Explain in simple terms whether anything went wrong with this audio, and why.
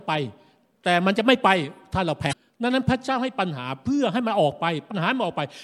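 Two brief glitches interrupt the speech: a short glitch from 2.29 to 2.33 s and a quick blip at 4.90 s. Both come from damaged data in a compressed stream: part of the file was wrong, so the decoder misread that spot and had to resync.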